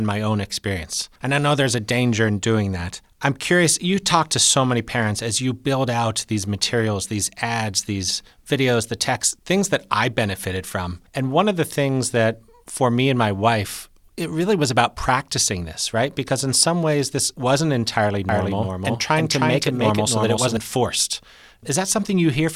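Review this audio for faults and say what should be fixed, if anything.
After "ways this wasn't entirely", 18.29 to 20.57 s has a doubled audio track, likely from a second capture path: a full-level copy trails by about 300 ms, repeating every waveform burst and spectrogram streak. Record through a single capture path and check edits for overlapping copies.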